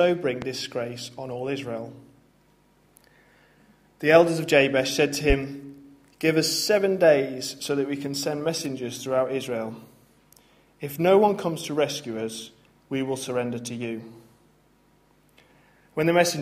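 Loud pops at 0.42–0.46 s and 5.30–5.34 s, single sharp thumps standing well above the sound, likely from an electrical pulse such as a switch or static.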